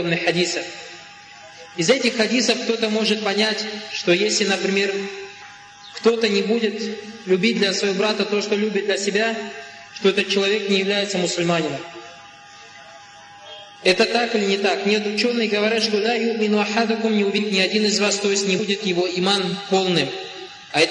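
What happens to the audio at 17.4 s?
At 17.37 s, compressed frames are skipped. About 150 ms of 23.2 ms frames never decodes, so the sound jumps ahead.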